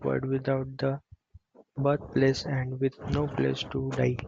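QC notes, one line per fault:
No technical faults are audible anywhere in this speech signal.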